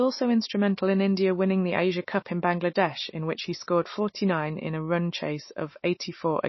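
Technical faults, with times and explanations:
Throughout, MP3 compression: the speech sounds watery and swirly, s sounds chirp metallically, and nothing remains above 5.8 kHz. This is likely an MP3 encoder short of bits, fitting roughly 24 kbps, which cuts the treble and drops weak frequency lines frame by frame.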